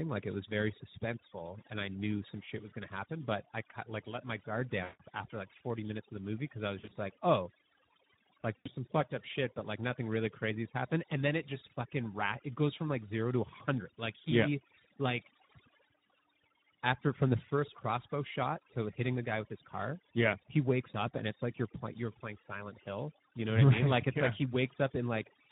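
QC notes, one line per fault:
throughout: overdone noise removal. The background drops away, with little twinkling specks left where stray frequency bands pop in and out. The reduction is clamping bands that sit near its noise estimate, and the softer edges of the speech get caught too.
throughout: Speex codec damage, plainly audible. The speech has that hoarse, grainy texture you get when a CELP coder is starved for bits on the excitation, which fits a low-to-mid quality mode around 11 kbps. The speech comes out noisy rather than clean, and the voice has a roughness layered on top of what the noise removal already did.
4.83–5.02 s, 6.79–6.97 s, 8.58–8.68 s: VoIP packet loss concealed by the speech codec. The first comes after "like let my guard" and before "after like". The second comes after "movie because i was" and before "like oh". The third comes just before "some fucked up shit". 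In each gap the decoder keeps replaying its last pitch and filter and fades them out, so the sound is stretched into a fading buzzy tone or coloured noise. The first gap is the longest, about 160 ms. The second is about 100 ms of dropouts scattered over roughly 160 ms, with no single run longer than 40 ms. The third is about 80 ms. The speech stays weak and a bit warped for a moment after each gap while the decoder recovers.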